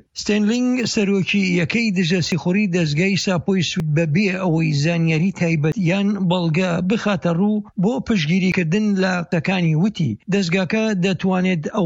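Abrupt forward jumps in the sound occur at 2.32, 3.8, 5.72, 8.52 and 9.32 s, skipping roughly 40 to 100 ms each, likely dropped buffers (overrun) where unread samples were overwritten.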